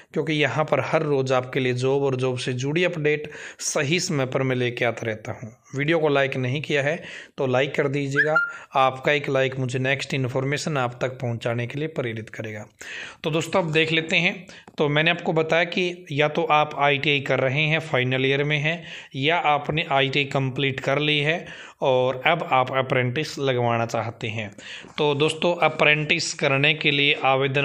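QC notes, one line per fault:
No faults heard.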